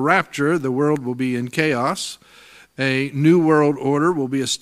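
No technical faults can be heard anywhere in the clip.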